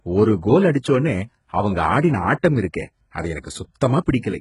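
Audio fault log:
Throughout: HE-AAC compression, heavy. Content stops at about 11.1 kHz. The treble below that sounds synthetic. It is likely HE-AAC v2 at a very low bitrate, around 12 kbps. Only the lower band is actually coded, and the upper range is rebuilt by copying lower bands upward under a coarse envelope. The copied harmonics don't align across the crossover, so sibilants in this speech come out gritty, metallic or lispy.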